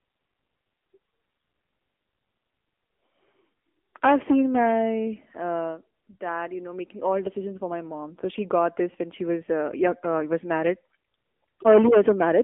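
From start to finish the speech runs through an AMR narrowband mobile codec, boxed into roughly 250 Hz to 3.4 kHz with nothing above 3.6 kHz. The coarse pulse-driven vocal-tract model leaves a plainly audible buzzy, synthetic edge, which fits a low-rate mode around 7.95 kbps.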